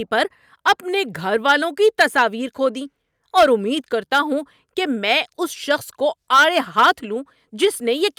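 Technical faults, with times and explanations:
No technical faults can be heard in this speech recording. There is nothing to list for any part of it.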